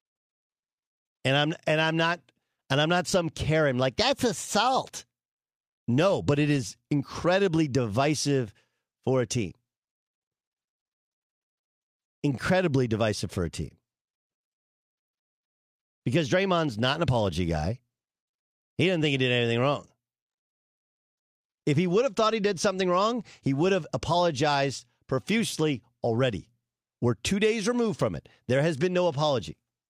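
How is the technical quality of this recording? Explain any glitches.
Nothing stood out on listening to this speech recording, and there are no glitches to explain.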